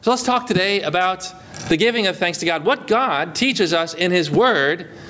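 From start to finish there's gain pumping: the gain swings by about 15 dB, squashing the sound so loud and soft parts sit closer in level, likely from a gain set far too high with a fast limiter clamping down.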